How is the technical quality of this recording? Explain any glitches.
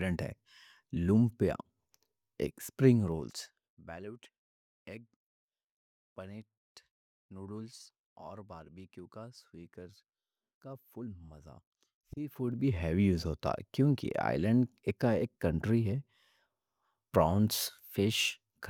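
The speech has two stretches where level changes are audible as glitches.

Zipper noise at 2.88 to 4.0 s and at 12.16 to 12.72 s, just before "ہیوج ہوتا کیونکہ". The gain falls, then later rises, by about 20 dB. It moves in unsmoothed steps of about 1 dB, roughly thirty per second. Each jump puts a small click into the waveform, so a fine ticking, zipping texture rides on the speech while the level moves.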